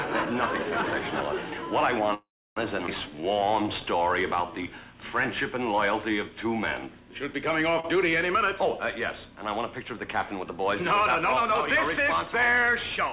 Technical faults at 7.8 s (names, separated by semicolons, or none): short stall from a late packet